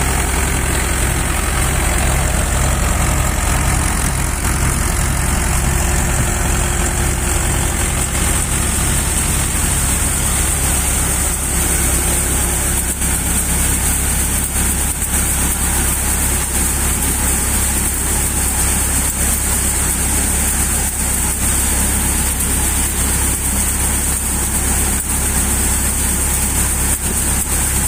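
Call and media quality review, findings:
No audible faults found in this recording; no dropouts, glitches, level jumps or timing errors to attribute to any component.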